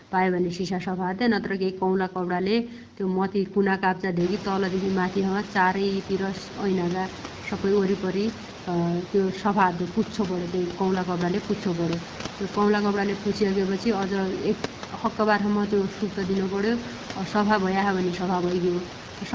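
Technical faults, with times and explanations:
No technical faults are present: the speech is band-limited to nothing above 8 kHz by the call's microphone processing and carried by the AMR wideband (HD Voice) codec at 12.65 kbit/s with only light coding effects, while the room's background noise rises by about 18 dB at roughly 4 s and then sits about 15 dB below the speech.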